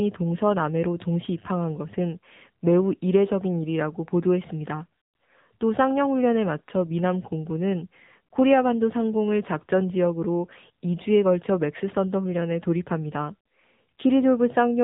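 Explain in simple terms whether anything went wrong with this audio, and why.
The whole recording, start to finish, has been squeezed through the AMR narrowband mobile codec, the speech codec old 2G and 3G phones use. It rebuilds speech from a simple model of the throat and mouth, and at this setting the damage is plain: the voice comes out buzzy and a bit synthetic. Nothing above about 3.8 kHz survives, which fits phone-style 8 kHz sampling, so everything sounds muffled and boxy.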